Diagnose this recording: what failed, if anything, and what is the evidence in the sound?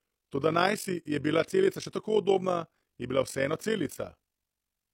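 A rough, robotic flutter runs through the whole speech track, the level pulsing by about 11 dB at a rate near 50 Hz. This is overlap-add ripple in a frame-based processing stage: the windowed frames are rejoined with an overlap whose gains don't sum evenly, so loudness dips once per frame.

From 3.30 to 4.02 s a galloping dit-dit-dit of brief buzzes sits well beneath the speech, roughly 30 dB down, with a 217 Hz buzz. These are GSM signalling bursts: a nearby 2G phone's radio pulses are rectified in the analogue wiring or input circuit and demodulated into audible buzzes.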